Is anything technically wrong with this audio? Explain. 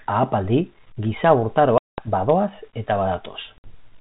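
Yes. The speech suffers packet loss on an ADPCM call, twice. Lost packets are replaced by silence, and the decoder's predictor and step size drift from the sender's. A hard-edged gap of about 200 ms opens at 1.78 s, just after "ahapaldi giza" (consistent with around ten lost packets), and speech resumes near 2.08 s with brief distortion that clears within tens of milliseconds. A shorter 60 ms dropout at 3.58 s recovers near 3.74 s. The underlying G.726 telephone coding at 32 kbit/s, capped at 4 kHz, is only lightly audible.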